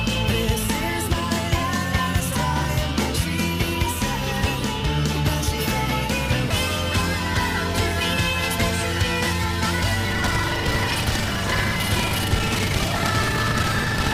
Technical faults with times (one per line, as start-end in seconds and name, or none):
10.08-14.14 buffer tearing